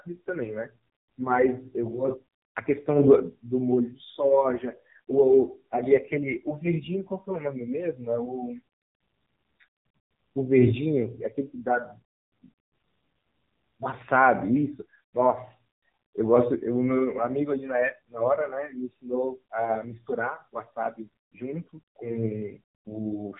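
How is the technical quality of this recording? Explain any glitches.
The quality is poor throughout. AMR narrowband mobile codec damage is heavy. Nothing above 3.8 kHz survives. Sparse pulse-driven vocal-tract modelling leaves speech buzzy and synthetic, consistent with roughly 6.7 kbps.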